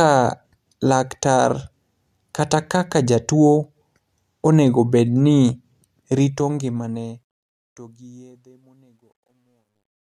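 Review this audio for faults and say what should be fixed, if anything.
The fade-out stage requantises without dither, to a resolution that fits a 12-bit word length, causing truncation distortion on a fade from 6.11 s to 10.2 s. The tail turns gritty, worst from 8.24 s, as the waveform collapses into coarse steps. Keep fades at a higher bit depth and apply dither whenever the signal is reduced to a shorter word length.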